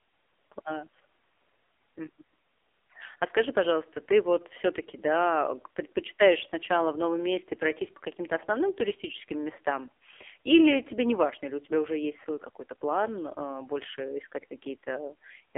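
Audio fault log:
Throughout: AMR narrowband mobile codec. Speech sounds buzzy, synthetic and boxed-in, with no lows below about 300 Hz and nothing above 3.6 kHz. The heavy damage fits AMR-NB's low 5.9 kbps mode, where too few pulses per frame drive the vocal-tract model.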